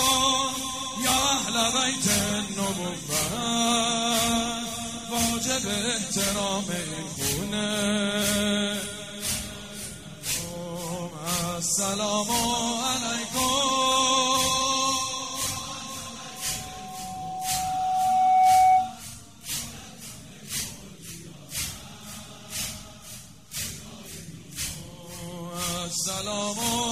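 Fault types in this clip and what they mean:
Loudspeaker feedback squeal: the microphone is hearing the loudspeaker it drives, and at one frequency the round-trip gain climbs above unity, so that frequency keeps reinforcing itself. Here a single tone near 747 Hz appears at 16.31 s and swells over roughly two seconds until it sits around 10 dB above the rest of the sound, before it stops at 19.02 s.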